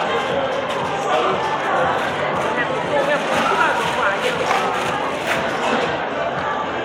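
No technical faults are audible.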